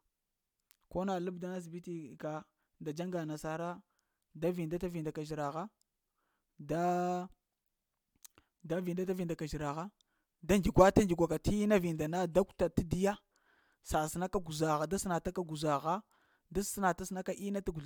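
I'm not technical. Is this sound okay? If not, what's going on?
No. At about 14.34 seconds, a microphone's power supply (phantom power) was switched while the input was live, and that sudden electrical jolt came through as a phantom power thump: a short, deep thud in the speech that dies away within a fraction of a second, gone by 14.52 seconds.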